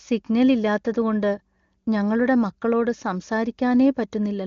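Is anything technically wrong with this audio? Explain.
No, nothing is technically wrong with this audio.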